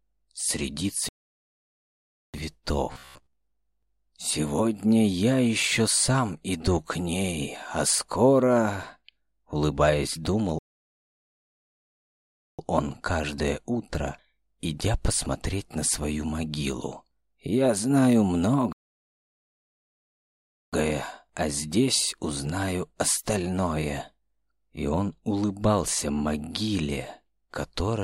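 At 1.09 s the audio stops dead for 1.25 s, a playback stall likely caused by the player running out of data, showing as a flat gap in the waveform and a blank spectrogram column. From 2.93 to 3.36 s robotic sound from repeated short buffers replaces the audio with a rigid 66.7 Hz buzz. That rate fits roughly 15 ms segments likely being repeated over most of that span, which shows as evenly spaced vertical striations. The same playback stall returns at 10.59 to 12.59 s and at 18.73 to 20.73 s, each a flat 2.0 s gap before the sound resumes.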